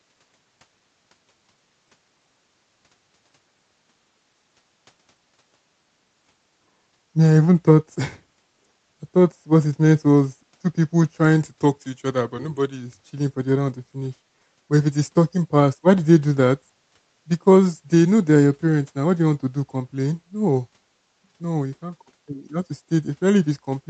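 No technical faults can be heard in this speech.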